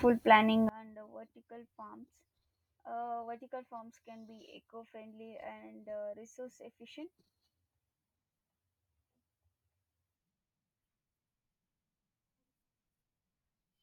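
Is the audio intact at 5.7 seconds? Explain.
No. From 0.69 s to the end, one stereo channel likely has inverted polarity, so whatever is common to both channels cancels when they are summed to mono. At 5.7 s the centred speech is down by about 25 dB, leaving only a faint remnant.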